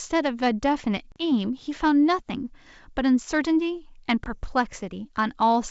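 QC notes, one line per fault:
1.12–1.23 s and 4.24–4.30 s, packet loss on an ADPCM call: about 40 ms, then 20 ms (roughly two packets, then one) drop to flat silence, a clean gap in waveform and spectrogram. The desynchronised predictor brings speech back with brief, slight distortion through the 7 kHz G.722 band.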